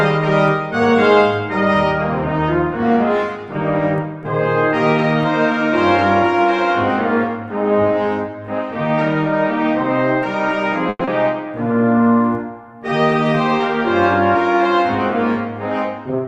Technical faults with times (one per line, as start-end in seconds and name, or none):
10.89-11.09 long network dropout
11.68-12.04 jitter buffer slow-down